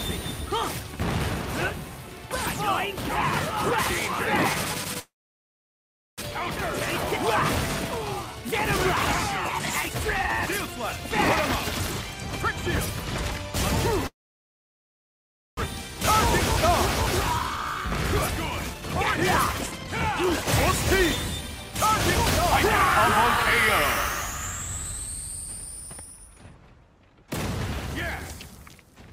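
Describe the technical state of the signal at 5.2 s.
At 5.2 s the signal is inside a long network dropout, 4.99 to 6.32 s: the last sound smears into a fading buzz, then near-silence, likely from lost packets.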